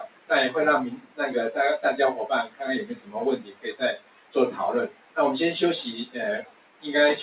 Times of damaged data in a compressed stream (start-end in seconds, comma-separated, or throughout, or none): none